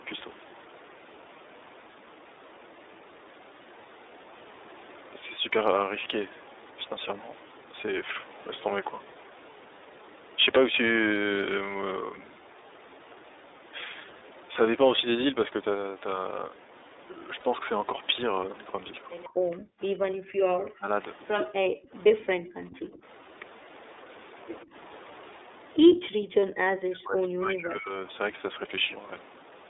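Throughout, the speech carries the sound of the iLBC codec: a narrowband, slightly rough, synthetic quality from coding each 30 ms frame independently, consistent with its 13.33 kbps mode. A spectrogram shows energy confined to about 300 Hz to 3.7 kHz, with empty bands above and below. The call's microphone processing also trims the lowest bass, which is normal.

At 17.40 to 17.43 s, lost iLBC frames leave a single 30 ms hole. The decoder bridges it by repeating the last pitch cycle with added noise, producing a brief buzzy, held vowel. A spectrogram shows a short stretch of frozen, smeared harmonics, and clean speech resumes immediately.

Echo leak appears at 19.23 to 19.28 s, 22.2 to 22.79 s and 25.94 to 26.0 s. A copy of the far-end voice returns 125 ms late, most likely because a loudspeaker side's echo canceller let residue through. It sits about 25, 20 and then only 5 dB below the speech. 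On a spectrogram it shows as duplicated harmonic patterns offset in time.

From 19.4 to 22.69 s, the talker's voice repeatedly dips and drops out in pieces, for roughly 1.5 s in total and by as much as 40 dB. This is likely speech suppressed in double talk, as the canceller ducks the near side while the other side speaks. The waveform shows sudden notches in the envelope, and the spectrogram shows high frequencies vanishing.

Between 21.45 and 23.04 s, the background gated by the echo canceller briefly collapses by about 40 dB, only around 150 ms in total. The room tone cuts off and snaps back. The waveform shows near-flat gaps in the noise floor, and the spectrogram shows dark vertical slots.

From 24.64 to 28.11 s, speech suppressed in double talk returns, with cuts of roughly 30 dB across about 2 s, in the same notched, patchy pattern on the waveform.

At 26.40 to 26.43 s, one more 30 ms run of lost iLBC frames produces another brief buzzy fill before the speech is intact again.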